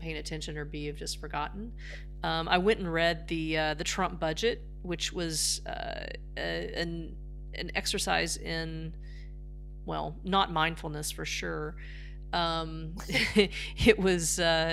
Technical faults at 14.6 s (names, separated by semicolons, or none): mains hum